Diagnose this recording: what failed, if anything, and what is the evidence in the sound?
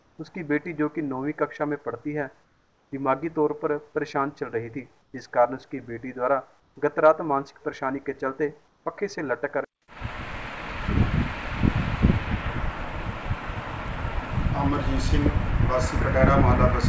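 Comfort noise in place of the background, at call processing: at 0–0.18, 2.44–2.92, 5.02–5.14, 6.60–6.76 and 8.68–8.86 s the background turns steady and featureless, about 1–4 dB quieter. It is likely discontinuous transmission, with the receiver synthesising noise during pauses. Unlike a noise gate, these gaps hold noise, not silence.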